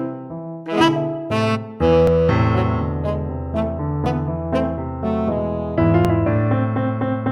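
At 2.07, 4.06 and 6.05 s, overlap between stream segments occurs: the time stamps of neighbouring segments, which run about 2 seconds each, claim the same stretch of time, and the player trims that shared stretch as though it were duplicated when it was not. Between 6 and 8 ms of real audio is dropped at each join, so the waveform jumps abruptly. Each boundary is heard as a brief click or tiny skip, recurring at roughly two-second intervals.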